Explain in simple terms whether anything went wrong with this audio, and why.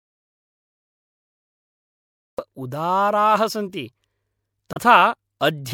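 Two separate things go wrong in this speech recording.

From the very first moment until about 2.39 s there is an audio dropout to silence. The recording is already dead when it begins, and the speech only arrives with "उदाराः सन्ति". A natural pause would still carry faint room noise, but this gap is completely empty, like a switched-off line. That points to the input being lost, most likely through a disconnected device or a mute, while the recorder kept writing silence.

Later, from about 4.72 to 4.77 s, a short stretch of only about 50 ms comes out wrong. This is damaged data in a compressed stream: part of the stored file was corrupted, so the decoder misreads those frames and has to hunt for the next clean starting point. It is easy to tell apart from the earlier dropout, which lasts far longer.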